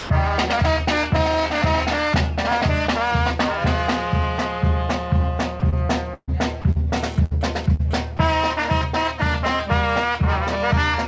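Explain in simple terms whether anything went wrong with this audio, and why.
Several things went wrong, all small and brief.

Sound dropped by the voice detector: the first tenth of a second (0.0 to 0.1 s) and 8.17 to 8.19 s become steady background hiss, likely because the sender judged the sound too quiet to send.

Sound chopped by the voice detector: at 5.60 to 5.74 s and 6.62 to 6.79 s, the sound flickers on and off with hiss, unlike a single clean dropout, likely from the detector switching repeatedly.

Burst of packet loss: at 6.14 to 6.30 s and 7.25 to 7.33 s, a chunk of audio is missing. The last sound is stretched and fades, with a short silence in the first gap, and then the audio jumps ahead.

GSM phone buzz: from 6.97 to 7.98 s, a harsh, raspy 217 Hz buzz from a nearby mobile phone sending data comes and goes. It has nothing to do with the sound itself.

Short concealed packet loss: at 7.75 to 7.81 s, a brief hole of about 40 ms is patched over. 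It is heard as a quick smear rather than the longer fading gap.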